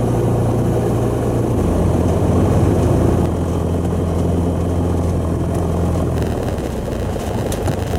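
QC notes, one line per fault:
6.16–7.98 s, block size mismatch (padded): each block handed on is about 92% of the length the next stage reads, so the remainder is zero-filled. The repeated gaps give a 91.9 Hz buzz, and the sound runs at 0.919 speed with timbre unchanged.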